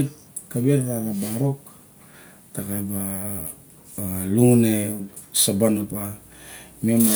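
No technical faults can be heard anywhere in the recording.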